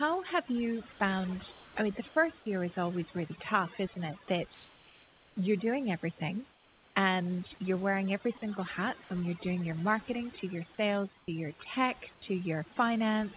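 Throughout the clip there is overdone noise removal. The suppressor is set too aggressively, so individual frequency bands near its noise estimate are pulled down or switched off, taking quiet parts of the speech with them. The background drops and breaks up into twinkling specks, and the voice sits within a band that stops at 4 kHz.

From 0.92 to 1.00 s, sound is dropped by the voice detector. For 80 ms the signal gives way to a steady noise fill, and about 30 ms of actual speech is lost. This is likely caused by the sender's detector treating a quiet stretch as background and halting transmission until speech retriggered it.

Comfort noise replaces the background at 1.52–1.76, 2.08–2.16, 4.54–5.36, 6.52–6.96, 11.18–11.28 and 12.14–12.22 s. In each gap the real background is swapped for steady, featureless noise, most likely synthesised by the receiver during discontinuous transmission. 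The fill runs about 2 dB quieter in the first three gaps, about 4 dB quieter at 6.52 s, about 10 dB quieter at 11.18 s and about 6 dB quieter at 12.14 s.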